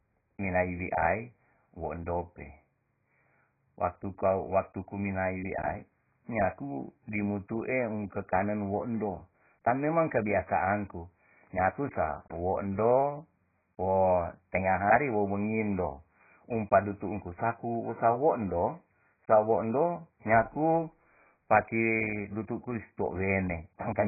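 From start to finish the speech carries heavy damage of the kind AAC compression leaves, likely from AAC-LC at a very low bitrate, around 12 kbps. Nothing survives above 2.5 kHz, so the sound is dull and muffled, with sibilants reduced to a smeared, fizzy wash and a warbling texture on sustained sounds. A spectrogram would show a hard ceiling at 2.5 kHz, with patchy holes and blotchy fill in the bands below it.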